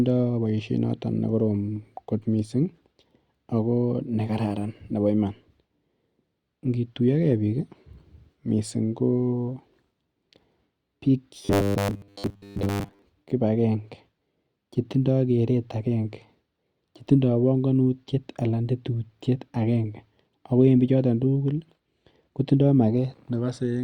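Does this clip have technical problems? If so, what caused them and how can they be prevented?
Yes. Between 11.43 and 13.02 s there is robotic sound from repeated short buffers, likely because new audio stopped arriving in time and the playback side kept looping its last 10 ms chunk while most of the real speech in that stretch was skipped. Repeating a 10 ms slice stamps a fixed 100 Hz buzz onto the speech, so it becomes a stiff, metallic drone that only loosely follows the original delivery. Giving the audio path a larger jitter buffer and enough processing headroom to keep data flowing steadily would prevent it.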